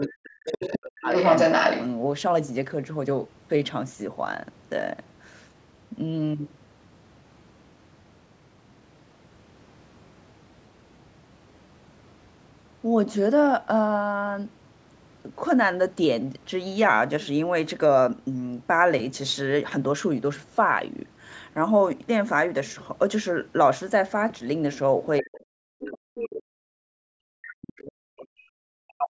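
Speech from a call, band-limited to 8 kHz by the call's microphone processing. An echo canceller that likely failed to remove the loudspeaker signal lets the other side's voice leak through at 0.0–0.07, 0.46–0.76, 1.09–1.86, 25.2–25.4, 26.15–26.28 and 27.7–27.81 s. It ranges from faint to as loud as the talker near 1.5 s. During double talk, the canceller likely couldn't separate the talker from the echo and suppressed both, so the speech drops by as much as about 40 dB from 0.06 to 1.1 s and from 25.21 s to the end.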